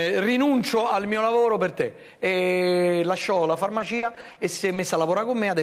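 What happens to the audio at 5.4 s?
Nothing goes wrong at 5.4 s; the audio runs on intact through that moment, with no dropout, click or distortion.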